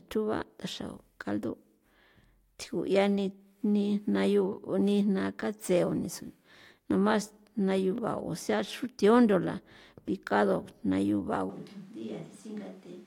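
From 11.5 s to the end, the speech turns abruptly hollow, roomy and bass-light, about 10 dB quieter, likely a switch to a distant microphone.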